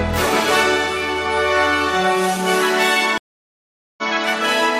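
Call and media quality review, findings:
Stream reconnect, 3.18 to 4.03 s: about 0.8 s of dead silence, then audio resumes at essentially the point it left off. Probable component: network transport or player. Connection dropped, player re-established the stream and restarted the decoder mid-stream.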